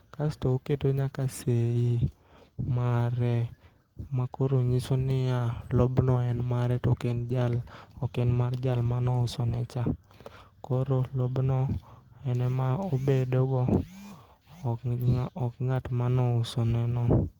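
A call bitrate drop from 7.07 to 9.65 s starves the Opus encoder of bits, consistent with a fall from about 32 to 15 kbps, leaving the speech coarse and muffled.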